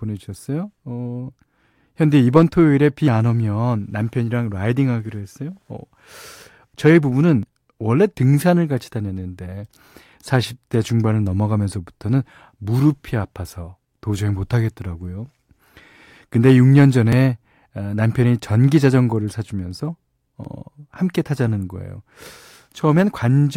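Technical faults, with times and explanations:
7.43, 17.13 and 20.45 s, dropped buffer (overrun): the speech skips ahead about 10 ms each time, likely because samples were overwritten before being read, splicing the sides together.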